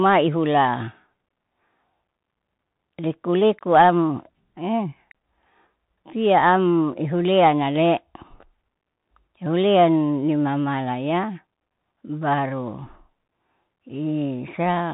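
Throughout, the speech carries Bluetooth CVSD headset codec damage: nothing passes above 3.8 kHz, and unlike plain band-limiting, the lagging one-bit step adds scratchy sibilants and granular hiss.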